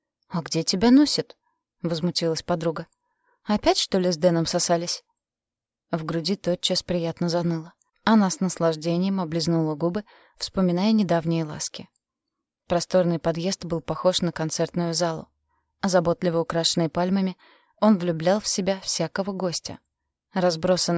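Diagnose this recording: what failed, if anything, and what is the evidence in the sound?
Nothing failed here as far as I can hear, so there's no problem at any stage of the chain to point to.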